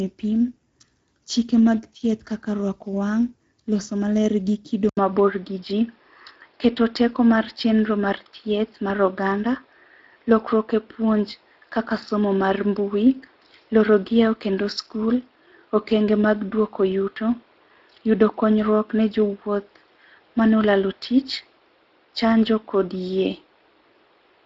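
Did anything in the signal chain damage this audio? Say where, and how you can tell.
Yes. Throughout the clip the speech has a rough, noisy, hoarse texture, and nothing reaches above 7.7 kHz. That is plainly audible Speex codec damage at the codec stage. The CELP excitation is coded with too few bits, and the sound points to roughly 16.8 kbps.

At 4.89 s an 80 ms silence is followed by duller, boxier sound that stops at 5.4 kHz and sits over a new noise floor roughly 40 dB down, at much the same level. This is likely the input switched to a poorer device, at the driver stage.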